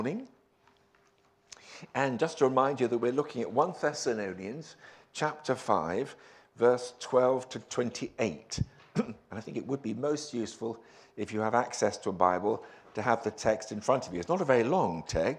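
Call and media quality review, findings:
Nothing stood out on listening that would call for a ticket entry.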